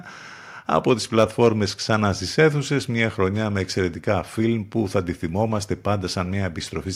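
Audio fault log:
No faults were heard: the speech signal stays continuous, with nothing in it that points to a problem in capture, processing or playback.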